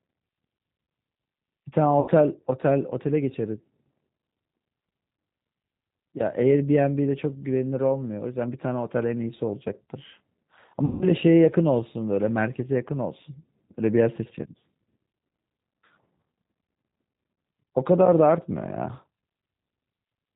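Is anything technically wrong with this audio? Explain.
Yes. Two faults are audible.

The whole clip carries G.729 codec damage, and it is plainly audible. The sound fits an 8 kbit/s codec of this kind. It rebuilds the speech from a model rather than the waveform: a vocal tract filter, a pitch predictor and a few pulses per 10 ms frame. Nothing above 4 kHz survives. The speech stays intelligible, but it sounds dull, rough and slightly synthetic throughout.

There is also VoIP packet loss concealed by the speech codec, at two points. The first runs from about 2.00 to 2.10 s, with 80 ms of audio missing, which fits four lost 20 ms packets. The second runs from about 10.85 to 11.06 s, with 160 ms missing, which fits eight lost packets. In each gap the decoder repeats its last pitch and filter settings at falling gain. The speech smears into a buzzy tone or a coloured noise that fades. Each frame builds on the one before, so the speech stays weak or distorted for a short while after the gap ends. 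The second dropout is longer.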